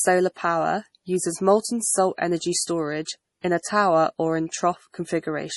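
Likely MP3 compression at a low bitrate starves the encoder throughout, leaving nothing above 11.5 kHz and weak lines flickering, so the speech sounds watery with metallic, smeared s sounds.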